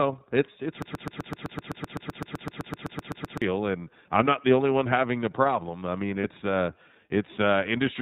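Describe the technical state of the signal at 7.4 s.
At 7.4 s the speech is still passing through the iLBC codec, as throughout, coding each 30 ms frame independently. The roughness points to a rate near 13 kbps, with nothing above 4 kHz and a plainly synthetic edge.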